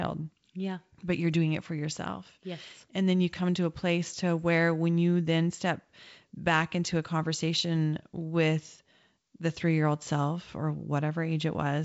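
Nothing's actually wrong with this speech recording; it's just been through G.722 wideband telephone coding at 64 kbit/s, which gives that familiar phone-call sound reaching up to about 7 kHz.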